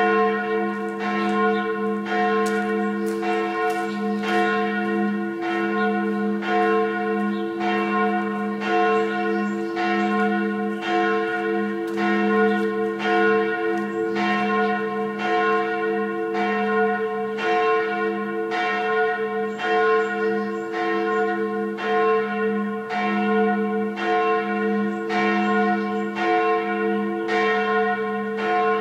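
Everyday sounds, with no technical faults to be heard.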